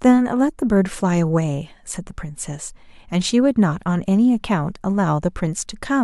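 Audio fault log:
0.59 s, corrupt frame decoded. A brief glitch cuts through the speech. A compressed frame arrived with damaged bits, and the decoder played it regardless. Misread gains and codes put energy at wrong frequencies, peaking near -35 dBFS, across what sounds like a few frames.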